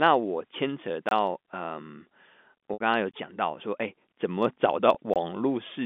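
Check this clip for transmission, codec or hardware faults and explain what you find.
Two kinds of fault are present in this speech: silent gaps at chunk joins, and two packet losses bridged by pitch repetition.

Gap between chunks, at 1.09 to 1.11 s, 3.11 to 3.14 s and 5.14 to 5.16 s. Each hole lasts about 23 ms and they recur every 2.0 s, which points to audio delivered in two-second chunks with a little padding or a late start at each join. No speech is lost. The flow is simply broken, and each break is a short dropout to silence.

Packet loss with pitch repetition, at 2.73 to 2.81 s and 4.95 to 4.97 s. The first loss spans 70 ms and the second 20 ms, which fits packets of 10 ms each. The receiver filled each hole by repeating the last pitch period. The 20 ms event is a brief held, buzzy note. The 70 ms one outlasts the roughly 50 ms fade, so it sinks toward silence before speech cross-fades back in. 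The telephone band of 200 Hz to 3.5 kHz, typical of G.711, is audible throughout.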